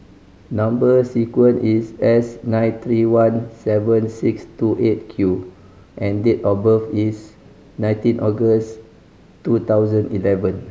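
No technical faults can be heard in this recording.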